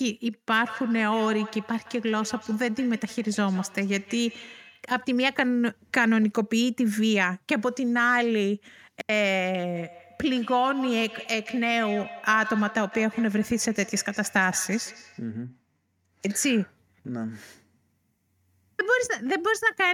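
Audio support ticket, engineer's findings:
Feedback echo between two devices, 0.64–4.93 s and 9.75–15.32 s. Sound returns roughly every 150 ms, thin and ringing. Peaks about 16 dB below the speech in the first stretch, about 13 dB below in the second. Probable component: a second device in the room joined to the same call. Its speaker replays this microphone's signal, the microphone picks it up again, and the local echo canceller ignores audio it did not play itself.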